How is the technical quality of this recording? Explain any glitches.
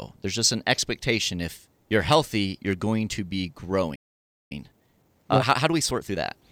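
The recording has two linked playback faults in the second half.

At 3.95 s a playback stall begins. The speech cuts off in mid-flow and the output is silent for about 0.55 s, until 4.52 s. The likely cause is a player that ran short of buffered data, or whose audio thread was held up. Either way, nothing reached the output for that half-second.

From 4.52 s to 6.44 s comes a time-compressed catch-up. The player trims the backlog built up during the gap. It cuts small slices out of the signal and cross-fades the remaining pieces together. The speech runs about 1.25 times faster than normal. The pitch stays where it was. The result sounds hurried.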